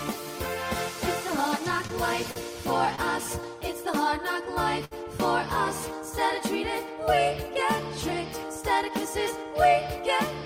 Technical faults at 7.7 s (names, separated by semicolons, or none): none